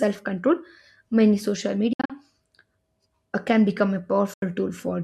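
After "control many social", from 1.93 to 2.10 s, the speech breaks into clean silent gaps totalling 122 ms (longest 61 ms); after "uh can become a", 4.33 to 4.43 s, 81 ms of audio drops out. Likely a Bluetooth dropout: speech resumes as though it kept playing, unlike an edit splice.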